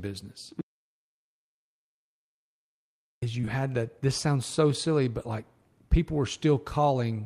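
From 0.61 to 3.22 s the speech stops dead and the track holds digital silence for about 2.6 s, with no room tone underneath; the input was likely lost upstream while recording continued writing silence, so whatever was said there is gone.

Immediately afterwards, from 3.41 to 3.45 s and again from 3.45 to 3.49 s, just before "had that", there are two back-to-back instances of short concealed packet loss. Each gap of roughly 20 ms was patched by extending the preceding sound, leaving a brief smeared, wobbly patch.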